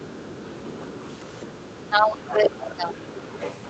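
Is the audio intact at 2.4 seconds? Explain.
No. At 2.4 s you're inside a stretch from 1.62 to 2.97 s where the speech dips hard, by around 20 dB at its deepest, losing its top end and breaking up in patches. That sounds like speech suppressed in double talk, likely from both ends talking at once, so the echo canceller couldn't tell the near talker from the loudspeaker echo and turned both down together.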